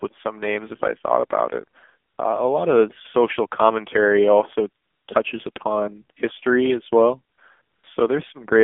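Throughout, the speech sounds buzzy and synthetic, confined to a narrow band from 200 Hz to 3.5 kHz with nothing above. This is the AMR narrowband mobile codec: a vocal-tract model rebuilding the voice from sparse pulses, at a rate that fits roughly 7.4 kbps.

At 2.10–2.18 s, 4.84–5.08 s, 5.52–5.56 s, 7.36–7.38 s and 7.62–7.84 s, the real background gives way to a smooth, steady hiss that switches in and out. This is AMR comfort noise: speech frames stopped for 80, 240, 40, 20 and 220 ms, and the receiver filled each gap with synthetic noise.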